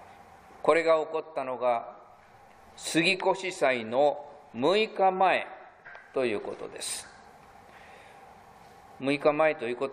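No technical faults can be heard anywhere in this audio.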